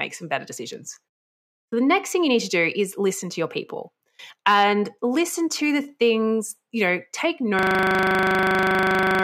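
A speech clip that ends in a system hang loop: from 7.59 s to the end, one 40 ms slice of audio repeats exactly, about forty times, giving a 25 Hz buzz as a frozen driver let the hardware recycle its buffer. A waveform shows an identical cycle, and a spectrogram shows evenly spaced striping.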